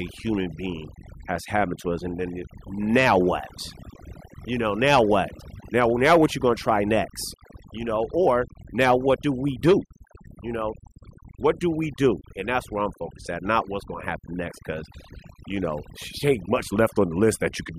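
All the way through, there's overdone noise removal: the reduction was pushed so hard that quiet bands get gated out, leaving twinkly near-silence between phrases.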